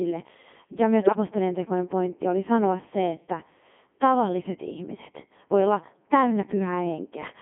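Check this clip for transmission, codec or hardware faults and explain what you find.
Two faults stand out: the whole clip runs through a very low-rate speech vocoder, and there's a short burst of channel damage early on.

Codec 2 vocoder, throughout: the speech sounds robotic and buzzy within a narrow band of roughly 200 Hz to 3.5 kHz, which fits Codec 2's top 3.2 kbit/s mode. It sends only pitch, voicing, level and spectral shape, then rebuilds speech from sine waves. Damage here is heavy.

Bit errors on digital voice radio, 1.01 to 1.16 s: for about 150 ms the synthetic voice lurches in pitch, loudness and tone into warbly gibberish. Flipped bits, at an error rate of a few percent, corrupted the parameters of several consecutive frames, consistent with about seven.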